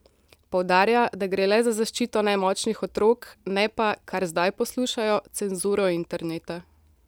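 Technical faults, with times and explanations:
No technical faults can be heard in this speech recording.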